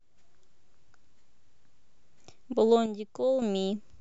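From 2.86 to 3.42 s the speech abruptly drops by about 6 dB, then returns, likely one channel dropping out before the mono sum.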